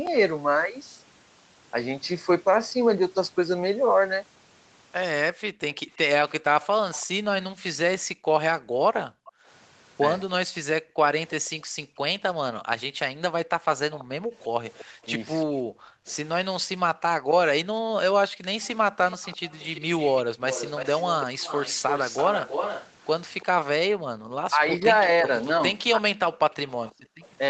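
From 5.35 s to 18.45 s the background is gated by the echo canceller. Whenever the far end plays out, the canceller clamps the microphone, so the room noise sinks by as much as about 40 dB and then snaps back. Together these dips last roughly three seconds. On a waveform the noise floor flattens to near-silence in short blocks. On a spectrogram the broadband haze disappears in vertical gaps with hard edges.

Starting at 5.95 s and running almost to the end at 27.29 s, a second copy of the speech trails the original by 334 ms, about 10 dB quieter. This is an echo leak. Its likely cause is a loudspeaker-side canceller that failed to remove everything its microphone picked up and sent the remainder back. A spectrogram shows formant patterns repeated a third of a second later, fainter.

The same background gating comes back from 23.9 s to 27.2 s, again reaching about 40 dB deep but covering only around 0.7 s in total.

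Between 24.49 s and 26.05 s the talker's own speech drops by roughly 15 dB in brief bites, adding up to a bit under half a second. The likely cause is speech suppressed in double talk: with both sides speaking at once, the canceller could not tell the local voice from the echo and attenuated both. On a waveform the speech envelope is notched. On a spectrogram the harmonics fade for those moments.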